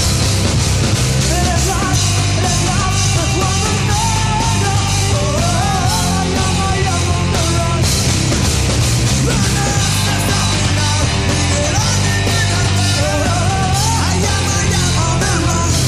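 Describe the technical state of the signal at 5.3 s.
At 5.3 s the signal sits inside a long run of clock slip clicks lasting from 0.11 s to the end of the clip. Two devices are likely running on separate, unsynchronised clocks that differ by around a thousand parts per million, so a single sample is dropped or repeated roughly every 20 ms. At about fifty slips a second, the ticks merge into a soft, steady rattle that is clearest on loud or sustained passages.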